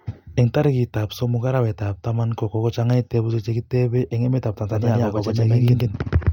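From 4.71 s to the end, the speech gets a doubled audio track: a second, equally loud copy trailing around a tenth of a second behind, dry and full-band, cutting in abruptly. Likely a slower capture path recording it twice.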